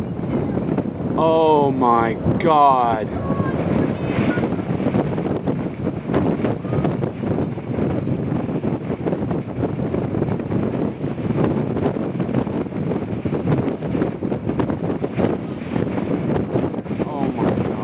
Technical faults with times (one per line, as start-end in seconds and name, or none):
none